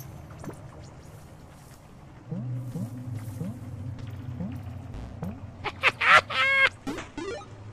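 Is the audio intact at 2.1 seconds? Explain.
Yes, at 2.1 seconds the audio runs intact, with no dropout, click, distortion or other fault to be heard at that moment.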